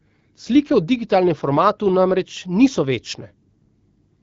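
No technical faults can be heard in this speech, which comes through an AMR wideband (HD Voice) codec at 12.65 kbit/s.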